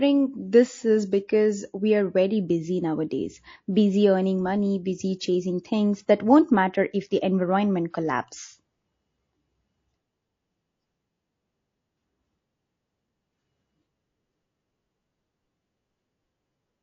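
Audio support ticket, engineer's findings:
Throughout the clip, the speech sounds watery and swirly, with metallic chirps on the s sounds and smeared consonant attacks. Damage is plainly audible. The likely cause is MP3 compression starved of bits, which fits an encode around 32 kbps. The encoder zeroes weak frequency lines that flicker on and off frame to frame.

At 7.91 s there's pre-echo: a short hiss of about 31 ms just ahead of a sharp attack, running about 11 dB above the surrounding floor, and the attack itself sounds soft. The probable component is the codec's transform block, which fits a roughly 72 ms long window. The transient landed late in the block, so quantisation noise sized for the loud part smeared back into the quiet bit before it. The encoder seems never to have switched to short blocks to contain it.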